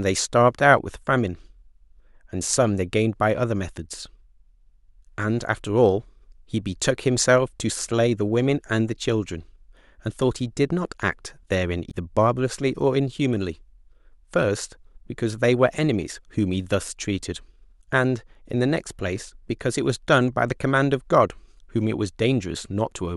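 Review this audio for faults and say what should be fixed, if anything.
At 11.87 to 11.94 s the speech is broken by a short glitch from damaged data in the compressed stream. The decoder hits corrupted frames, loses sync and hunts for the next valid frame header, producing about 70 ms of garbled output. Verify stream integrity with checksums and keep metadata out of the audio frames during transfer.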